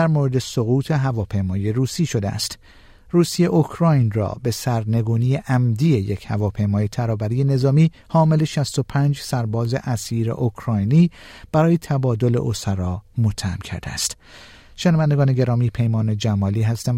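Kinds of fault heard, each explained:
Nothing stood out on listening to this speech recording.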